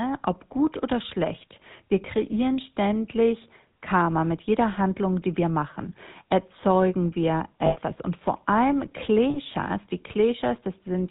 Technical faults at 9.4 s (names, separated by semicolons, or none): GSM full-rate codec; lost GSM frames